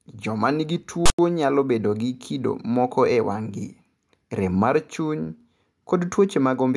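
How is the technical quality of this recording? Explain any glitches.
The speech recording has one glitch. From 1.06 to 1.19 s a harsh, loud rasp cuts in with hard edges and then drops to dead silence. This is file tags played as audio: a block of text tags was decoded as samples, giving a lopsided buzz, and its zero padding then played as silence.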